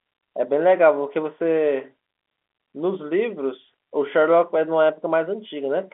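Nothing in this speech recording is technically wrong. It carries the narrow sound of G.711 telephone coding, with the line band running from about 250 Hz to 3.4 kHz and nothing above 3.7 kHz.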